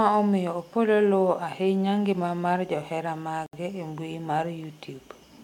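Around 3.46 s, right after "ahinya ngima mar johera", the speech drops out for about 68 ms and picks up again at 3.53 s with "e mbui". That's a gap at a join of encoded pieces: two separately encoded chunks were butted together untrimmed, so the encoder's start-up delay and the padded final frame both survive as dead air. The edges are smeared, and the sentence resumes exactly where it stopped.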